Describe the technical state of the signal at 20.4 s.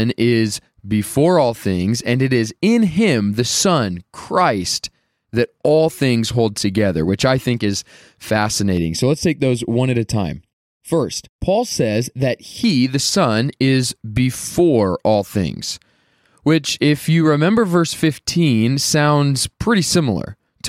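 Nothing is wrong with the signal at 20.4 s; the audio is intact at that point.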